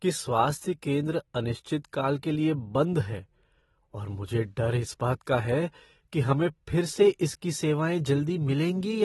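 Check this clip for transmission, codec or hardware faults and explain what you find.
One fault is present for the whole clip: AAC compression damage, plainly audible throughout. Nothing reaches above 11.8 kHz, and the speech sounds dull and smeared, with a watery, warbling fizz on sibilants. The likely cause is AAC-LC coding at a low bitrate, which fits about 24 kbps. The encoder lowers its cut-off and quantises frequency lines so coarsely that spectral bands drop out. A plain low-pass filter would cut the top cleanly, without this swirling texture.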